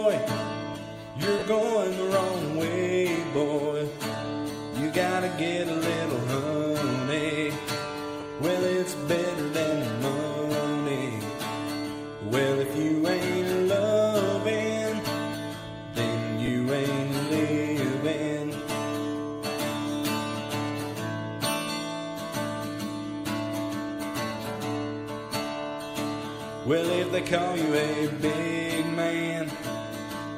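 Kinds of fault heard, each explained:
lost LE Audio frames: three short gaps, at 1.39 s (about 30 ms), 8.21 s (10 ms) and 16.46 s (20 ms), where the LC3 decoder reuses the last spectrum with random signs, so the sound briefly smears into noise.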